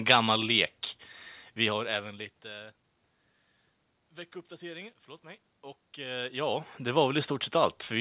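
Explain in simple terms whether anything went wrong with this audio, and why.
Nothing went wrong here: the dips and swells in loudness around 1.5 and 6 seconds are just the talker shifting position near the microphone, and the background noise is simply the room itself.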